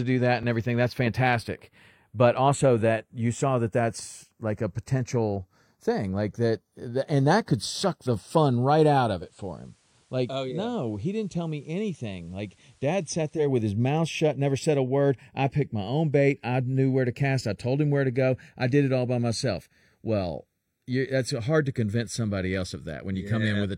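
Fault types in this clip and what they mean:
Channels drifting apart: The left and right channels run on clocks that disagree by around 20 parts per million, so the offset between them creeps steadily and reaches roughly half a millisecond by the end. Summed to mono, the comb notches glide slowly through the speech as a slow flanging. Unlike a fixed offset between channels, the colouring never settles on one tone but keeps shifting throughout.
Digital radio blending to analogue: From 9.13 to 13.53 s the receiver loses its digital stream and cross-fades over about 205 ms to the FM broadcast of the same station, then back. In that stretch the level drops about 4 dB, and a hiss sits roughly 35 dB below the speech. A dropout would leave a gap. Here the sound carries on, only quieter and noisier, with a smooth fade at each edge.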